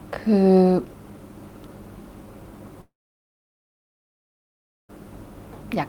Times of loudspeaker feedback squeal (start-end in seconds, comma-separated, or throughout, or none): none